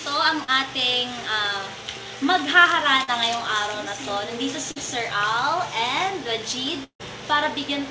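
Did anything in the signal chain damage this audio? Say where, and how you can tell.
Yes. Brief smears at 0.44–0.51, 3.04–3.10 and 4.71–4.79 s are short concealed packet loss. About 40 ms each went missing, and the receiver bridged each gap by extending the last sound.

At 6.84–7.02 s the sound trails into a fading buzz, then about 90 ms of silence. A long network dropout, roughly 160 ms lost, is the likely cause.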